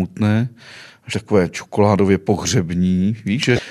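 A speech clip with two short bursts of damaged data in a compressed stream. The first runs from 1.10 to 1.13 s, the second from 3.56 to 3.59 s. Each lasts about 34 ms and sounds like a brief chirp or blip cutting through the speech. Corrupted bytes in the encoded file cause the problem. The decoder misreads those frames, loses its place, and must hunt for the next valid frame header before clean sound resumes.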